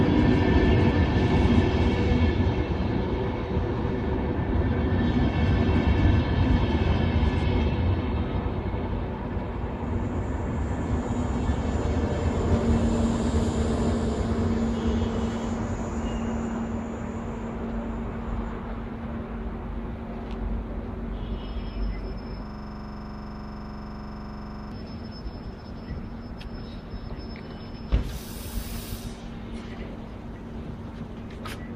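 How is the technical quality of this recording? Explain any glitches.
There is one glitch: a system hang loop from 22.46 s to 24.72 s. The computer or its audio driver stalled, and the sound hardware kept replaying the last block in its ring buffer. A 42.67 ms slice of audio, which fits a 2048-sample buffer, repeats exactly 53 times at about 23.4 Hz. The result is a rapid, rattling stutter of the same fragment with a low buzzy pulse at that rate, until playback resumes.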